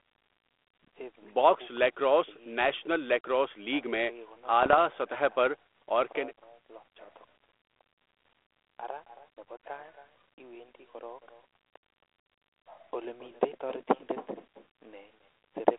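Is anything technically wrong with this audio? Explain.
Yes, there are two problems.

Echo with no canceller runs through the whole clip. The far end seems to play the call over a loudspeaker, and its microphone feeds that sound back down the line with nothing removing it. The speech returns after a delay of roughly a third of a second, about 18 dB below the original. Every phrase is trailed by a faint, thinner copy.

Bit errors on an ADPCM link hit from 4.63 to 4.78 s. The line uses narrowband ADPCM coding, consistent with G.726 at 32 kbit/s, and in this stretch some of its bits arrive flipped at an error rate of a few tenths of a percent. Each corrupted code also throws off the decoder's adaptive step size and prediction, so the damage rings on for several milliseconds rather than staying a single wrong sample. Over those 150 ms or so, this comes through as clicks and rough, gritty bursts with brief jumps in level.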